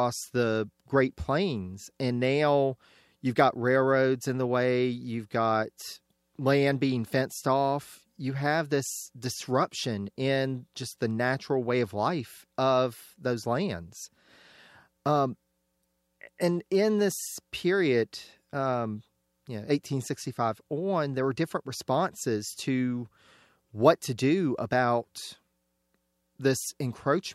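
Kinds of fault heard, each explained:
No technical faults can be heard anywhere in the speech recording; the signal stays steady and continuous with nothing disturbing it at any point.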